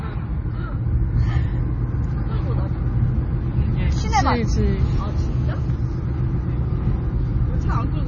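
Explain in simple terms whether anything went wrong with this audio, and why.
Two things went wrong. Throughout the clip, nothing is heard above about 6.9 kHz, so the sound is dull, and it has a watery, swirling quality. That points to heavy MP3 compression, likely at a low quality setting, where the encoder cut the treble and dropped fainter detail.

From 4.54 to 5.68 s there is a hard, raspy buzz at 217 Hz that has nothing to do with the recorded sound. This is GSM phone buzz: a nearby 2G phone on a call sends radio bursts, and the audio circuitry turns them into a steady, harsh tone.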